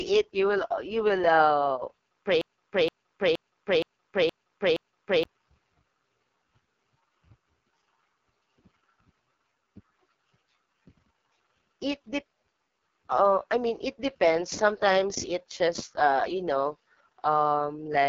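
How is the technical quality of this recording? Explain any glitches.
The recording has poor technical quality: heavy low-bitrate codec damage runs through the whole clip, and a stuck loop interrupts it early on.

AMR wideband (HD Voice) codec: Throughout, the speech sounds rough and raspy, with a gritty, buzzy edge typical of the lowest AMR-WB modes; the roughness fits a rate near 6.6 kbit/s. The codec models the voice as pulses driving a vocal tract filter, and at this rate that model is too coarse to sound natural. On a spectrogram, energy stops sharply at about 7.2 kHz, and the band above 6.4 kHz looks like smeared noise rather than harmonic detail.

Broken-record loop: From 2.41 to 5.25 s, a 470 ms fragment repeats exactly, six times back to back. The likely cause is a stalled player, encoder or stream that kept resending the last chunk it held, so whatever should have played in those seconds is gone. 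The waveform shows identical blocks tiled end to end, and the spectrogram shows the same pattern stamped repeatedly at regular intervals.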